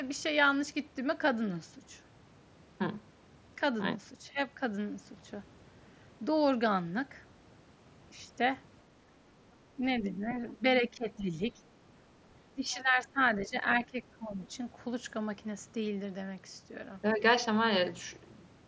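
From 9.75 s to 14.41 s the speech dips in level seven times: 9.75 to 9.81 s, 10.01 to 10.64 s, 10.81 to 11.36 s, 11.54 to 11.59 s, 12.52 to 13.17 s, 13.47 to 13.55 s and 13.86 to 14.41 s. Most drops reach about 10 dB. The one at 12.52 s goes deepest, about 15 dB. This is speech suppressed in double talk. The likely cause is the far side playing on the loudspeaker while this talker spoke. The echo canceller could not tell them apart. It turned everything down.

Inside that deepest dip, from 12.72 to 12.82 s, a second voice comes through. It is brief, about 20 dB below the main speech. This is the other side's voice leaking through, likely from the loudspeaker. The echo canceller left a scrap of it in the microphone signal. Nothing is heard above 8 kHz, consistent with the mSBC headset path and its light grain.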